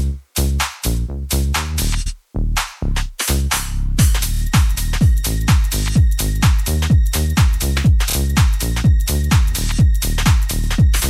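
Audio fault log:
2.05–2.13 s, 4.33–4.40 s, 8.09–8.14 s, 10.62–10.67 s: repeated frames. Blocks of 78, 26, 26 and 52 ms replay, the 26 ms blocks three and two extra times, causing stutters. Multiples of 26 ms suggest whole compressed frames re-sent, lengthening the audio each time.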